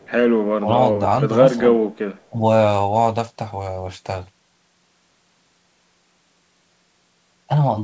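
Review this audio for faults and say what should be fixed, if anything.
From 0.00 to 0.11 s and again from 2.16 to 2.28 s, a faint copy of the speech returns 307 ms late, far below the main level. This is likely an echo leak. The far end's echo canceller let loudspeaker pickup through. Headphones or a better-tuned canceller there would prevent it.

From 0.56 to 0.70 s the speech drops sharply, by around 20 dB. From 2.31 to 2.35 s it dips only slightly. This is likely speech suppressed in double talk. The echo canceller took the talker for echo while both sides spoke. Gentler suppression during double talk would prevent it.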